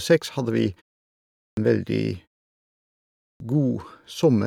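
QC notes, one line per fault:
1.52 s and 3.35 s, clipped start after a pause: after silences of 0.79 s and 1.16 s, about 52 ms at the onset of each following utterance is swallowed while the output device wakes and relocks. Speech therefore springs out of dead silence already mid-sound, missing its first sounds. On the waveform the envelope jumps straight up with no rise. The spectrogram shows energy beginning as a hard vertical edge, with the first sounds absent.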